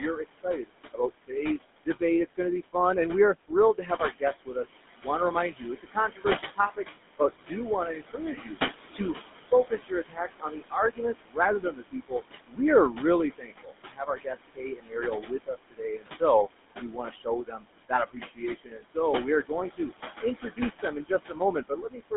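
Right from the start, the GSM full-rate codec colours everything. The audio sits in a narrow line band of about 200 Hz to 3.6 kHz with nothing above 3.8 kHz, and the pulse-driven vocal-tract model gives the speech that gravelly buzz, consistent with the 13 kbps full-rate mode. Noise suppressor artifacts also run through the whole clip. The room noise, about 10 dB below the speech, gets pushed down by about 17 dB in the gaps and then swells back under the talking. From 0 to 2.75 s, just before "and we are", the suppressor also cuts speech it mistakes for noise, pulling it down by as much as about 21 dB over less than a second in total. It does the same from 3.35 s, right after "and we are", to 22.12 s, with drops of up to about 22 dB adding up to around seven seconds. In both stretches, consonants and word endings sound swallowed or faint.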